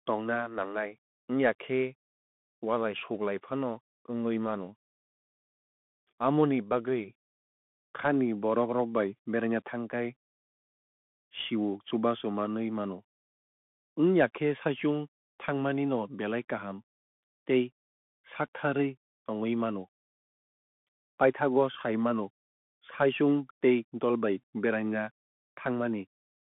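From the first second to the end, the whole clip runs through a Bluetooth CVSD headset codec. The speech sits in a narrow telephone band of roughly 200 Hz to 3.5 kHz, with nothing at all above 3.8 kHz, so it sounds boxy and dull. CVSD codes each sample as a single up-or-down step whose size keeps adapting, which fits a 64 kbps link. Here that damage is plainly audible: a grainy hiss under the speech, scratchy s sounds, and roughness on loud bright moments where the step can't keep up.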